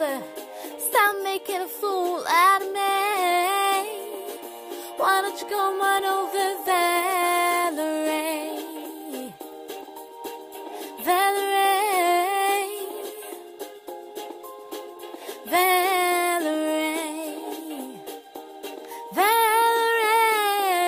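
Compressed frames skipped at 4.35 s and again at 8.19 s. At each point whole blocks of the compressed stream never reach the output, either missing from the file or rejected by the decoder as damaged, so playback leaps forward. The first jump drops roughly 150 ms, which fits about five 26.1 ms frames, and the second drops around 50 ms, about two frames. Because adjacent frames overlap, each join sounds like a short smeared blip rather than a sharp click.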